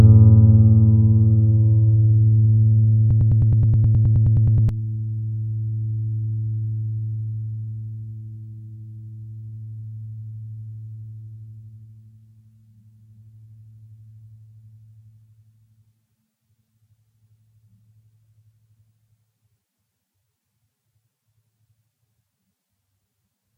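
Between 3.11 and 4.69 s, the player, encoder or stream likely stalled and kept resending the last fragment it held, producing a broken-record loop. A piece of about 0.11 s (105 ms) of the everyday sound repeats exactly, back to back, 15 times, giving a rapid mechanical stutter that lasts about 1.6 s. Whatever should have played in that span is lost, and the sound resumes at 4.69 s without it.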